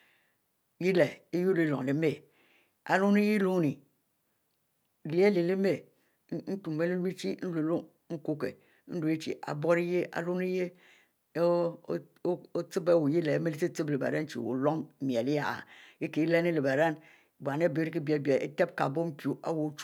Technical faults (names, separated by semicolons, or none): none